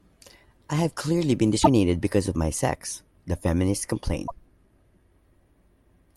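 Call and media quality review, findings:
Damaged data in a compressed stream: two short glitches in the speech at 1.60–1.67 s and 4.26–4.31 s. Probable component is the decoder hitting corrupt frames and losing sync until the next frame header. Spectrogram shows brief breaks in the harmonic structure; waveform shows abrupt discontinuities.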